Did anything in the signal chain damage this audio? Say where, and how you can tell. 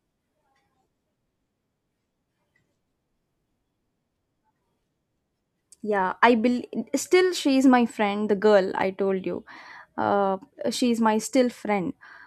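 No, nothing in the signal chain damaged this audio.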